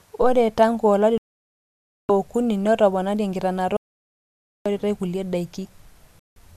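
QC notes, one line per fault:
1.18–2.10 s and 6.19–6.37 s, digital broadcast dropout: the sound mutes for about 0.92 s, then again for about 0.17 s near the end. The receiver stopped getting decodable frames, either because it lost the signal or because frames failed their checksum, so it muted its output until clean frames resumed. The first hole's length fits a run of 38 lost frames of 24 ms each, and the second fits 7. Whatever was transmitted during both holes is gone.
3.77–4.66 s, audio dropout to silence: the sound stops abruptly mid-flow and returns about 0.89 s later. The gap is silent, with no room tone or background left underneath. The likely cause is an input that dropped out through a disconnected device, a failed link or an accidental mute while the recorder kept writing silence, so nothing from that stretch was captured.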